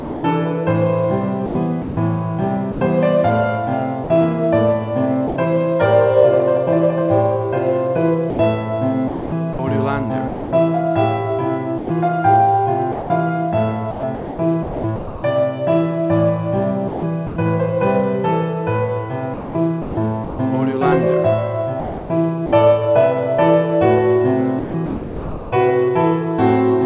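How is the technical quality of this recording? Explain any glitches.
The recording is narrowband, with nothing above 4 kHz, which fits a G.711 A-law call at 64 kbps, and it has repeated dropouts. Sound chopped by the voice detector occurs at 0.0–5.36, 8.3–15.23, 16.88–17.36, 19.34–20.39, 21.8–22.52 and 24.59–25.52 s. The sender's detector likely gated quieter passages and replaced them with comfort noise, so the sound breaks up.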